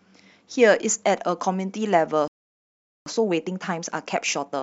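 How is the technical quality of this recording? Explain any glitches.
The recording has two linked glitches, a stall and the hurried playback that follows it.

Playback stall, 2.28 to 3.06 s: the speech cuts to silence mid-flow for about 0.78 s. The likely cause is the player running out of buffered data, or its output thread being blocked, until it recovered.

Time-compressed catch-up, 3.06 s to the end: to recover the lost time, the player trims small slices and cross-fades the joins, running at 1.15 times normal speed. The speech sounds rushed but keeps its pitch.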